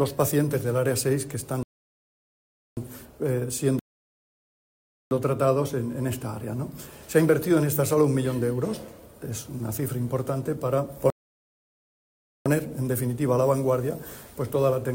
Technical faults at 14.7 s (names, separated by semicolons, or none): none